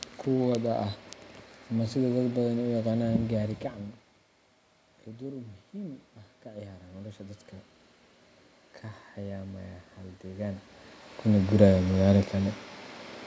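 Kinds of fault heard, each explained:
Automatic gain rising: after the input level dropped by about 15 dB, the gain control slowly added about 4 dB between 5.05 and 7.47 s, so the speech and the room noise behind it swell together over roughly two and a half seconds.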